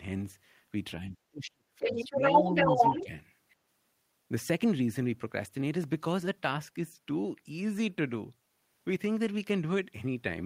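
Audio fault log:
1.01–2.22 s speech suppressed in double talk: the talker sinks by roughly 40 dB for about a second in total, likely the echo canceller turning down both voices as they overlap. The gaps follow the other side's speech, not random packet timing.
1.82–3.03 s other side's voice leaking through: a second voice rides about 5 dB above the talker, likely loudspeaker echo the canceller left in the microphone signal. It adds a foreign voice rather than removing sound.
2.41–3.12 s speech suppressed in double talk: a much shallower dip of about 5 dB, covering roughly 0.4 s, likely suppression set off by the overlapping far-end voice, not a level fade.
3.49–3.56 s other side's voice leaking through: a brief, faint scrap about 35 dB below the talker, likely residual echo slipping past cancellation, too short and quiet to be a true crosstalk stretch.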